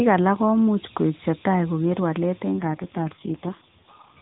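Right after "koik chetai koker walet", from 2.52 s to the end, the voice turns rougher, buzzier and more synthetic, with no gap and no loss of bandwidth. This is an AMR rate drop. The codec's bitrate falls, which fits a switch from 12.2 to 4.75 kbps, leaving too few bits to model the voice cleanly.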